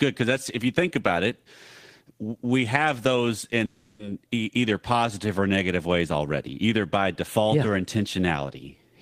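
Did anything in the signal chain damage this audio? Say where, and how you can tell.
Yes, at the network stage. Just after "we have those", from 3.65 to 4.01 s, the last sound stretches into a fading buzz for about 340 ms. That is a call audio freeze, likely from delayed packets draining the jitter buffer. Unlike packet loss, the speech resumes exactly where it stopped.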